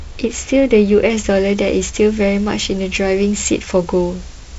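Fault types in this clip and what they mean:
Pre-emphasis left on, from 1.10 s to the end: the treble boost applied before recording was never undone by the matching cut, so the top end sits about 8 dB above 1 kHz at 10 kHz, a tilt that fits the CD 50/15 µs curve, leaving the speech thin, bright and sibilant.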